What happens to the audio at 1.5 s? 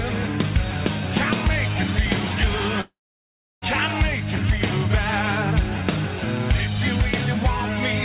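Nothing goes wrong at 1.5 s: the audio there is intact, carrying only the narrow telephone-band sound of the G.711 A-law call path, with nothing above 4 kHz.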